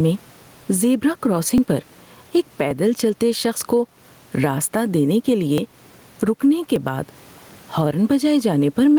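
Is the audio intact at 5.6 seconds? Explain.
No. At 5.58 s there's a small jump forward, likely a dropped buffer (overrun), where about 10 ms of samples got overwritten and the two sides were butted together. Gain pumping is also running across the whole clip, likely from a limiter clamping an overly hot input, so the gain swings by roughly 10 dB under loud sounds.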